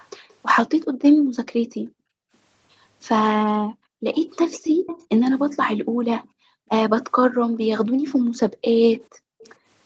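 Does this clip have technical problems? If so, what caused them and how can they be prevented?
Yes. There's an echo leak, likely from a far-end loudspeaker: a faint delayed copy of the speech, about 0.40 to 0.45 s late, at 0.0–0.35, 1.06–1.13, 4.14–5.27 (clearest) and 9.42–9.53 s. Better echo cancellation or a headset would prevent it.

The background is also gated by the echo canceller, dropping by up to about 40 dB at 0.88–2.32, 3.68–4.07, 5.84–6.68 and 7.27–9.42 s. Gentler suppression settings would keep the room sound steady.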